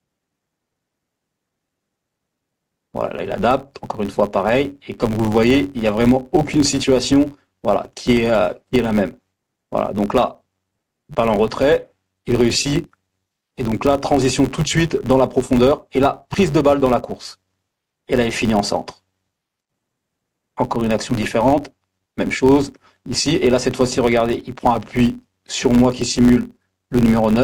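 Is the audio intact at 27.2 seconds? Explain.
No. At 27.2 seconds, as across the whole clip, a steady buzz near 93.8 Hz rides on the sound, rising and falling with its level. This is a filter restarted on every block. The filter discards its memory at each block boundary and begins again from silence, so every block opens with a small transient. Those repeating clicks fuse into the buzz, and their rate fits a 512-sample buffer.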